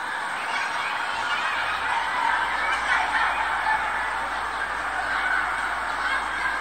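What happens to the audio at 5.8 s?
Nothing goes wrong at 5.8 s; the sound there plays through intact, with no dropout, click, distortion or other fault.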